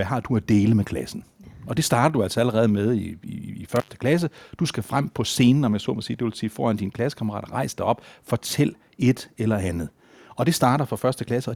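At 3.76 s the speech cuts out through an intermittent contact: a loose cable or plug briefly opens, silencing the line for about 85 ms until 3.90 s. Crackle at both edges and faint hiss during the gap distinguish it from a clean digital dropout.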